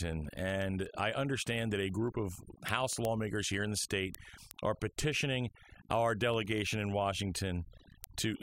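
A speech recording with two faults. Overdone noise removal runs through the whole clip. The background drops away, with small twinkling specks where noise used to be. The reduction was set too hard. It pushes individual frequency bands down or out whenever they come close to its noise estimate. The quieter parts of the voice fall below that line and vanish with the noise. Word clock ticks run from 0.13 s to 8.41 s. They come at a steady rate of roughly ten per second, about seventy in all. They are sharp and uneven in strength. This points to a digital link read by a device on its own clock, not locked to the sender. The two clocks differ by something like 150 parts per million. Each time they slip past each other, one sample is dropped or repeated, and a tick is heard.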